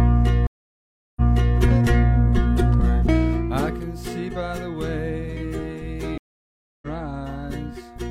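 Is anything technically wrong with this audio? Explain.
Yes. The music has two stream reconnects and one burst of zipper noise.

Stream reconnect, 0.47 to 1.58 s and 6.18 to 6.87 s: the connection dropped, playback went silent, then a new decoder started mid-stream. The first gap lasts about 0.69 s and the music resumes 0.42 s earlier, repeating material. The second gap lasts about 0.64 s and the music resumes roughly 0.7 s later, skipping material. Each restart is muted or fades in over its first frame or two.

Zipper noise, 3.01 to 3.80 s: the level was pulled down by about 15 dB in coarse, unsmoothed steps, at around 40 per second. Each step jumps the waveform and adds a small click, so a fast ticking rides on the music while it gets quieter.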